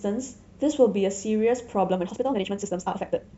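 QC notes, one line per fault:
1.88–3.38 s, time-stretched section: from 1.88 s to the end the speech suddenly runs at about double pace (1.99x) with unchanged pitch, sounding rushed, likely because software squeezed this part to fit a length by dropping short pieces.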